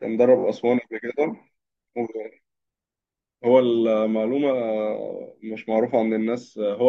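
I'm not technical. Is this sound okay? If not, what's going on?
No. Near the start, at about 0.39 to 0.43 s, the speech gives a brief stutter: the same tiny slice of sound plays three times in a row. This is a fault called repeated frames. The audio is stored in short chunks, and here a chunk of about 21 ms was sent again twice, so the player repeated it, adding roughly 43 ms to the clip.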